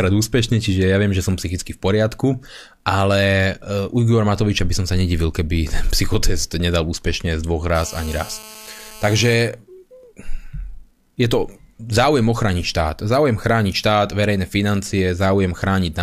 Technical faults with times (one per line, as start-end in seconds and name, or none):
7.75-9.34 GSM phone buzz